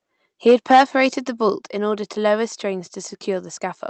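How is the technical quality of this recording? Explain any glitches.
The recording has two audible problems: a stretch of hard distortion near the start and two sudden drops in level. It passed through a call codec whose high-frequency content stops at 8 kHz, which shows as a flat ceiling on a spectrogram.

Microphone overload, 0.47 to 1.03 s: The loudest peaks are driven about 7 dB past full scale, likely because the microphone input gain was set too high, so roughly one sample in twenty is sheared off at the converter's limit. It sounds harsh and crackly. The waveform shows flat-topped peaks, and the spectrogram shows broadband smearing above the harmonics.

Microphone volume stepped down, at 0.51 s and 1.5 s: The level falls abruptly by about 2 dB at 0.51 s, during the distortion, and by about 4 dB at 1.5 s, just before "in order to lower". This is likely automatic gain control reacting to the clipping by cutting the device's input volume in one step. 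Voice and background drop together, which appears as a sharp step down in the waveform envelope and a uniformly dimmer spectrogram afterwards.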